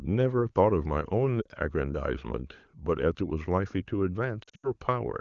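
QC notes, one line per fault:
1.42 to 1.47 s: lost AMR speech frames. A short dip and warble of about 40 ms, which fits two missing 20 ms frames. The decoder filled the gap by repeating the last good pitch and vocal tract settings at lower gain.
4.44 to 4.71 s: lost AMR speech frames. Losses scattered over about 200 ms make the speech sag, worst in an 80 ms stretch where the concealed sound fades. The wideband codec around these gaps sounds clean.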